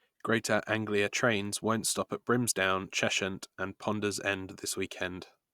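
No technical fault can be heard anywhere in this short speech recording, and the signal holds steady with no audible disturbance.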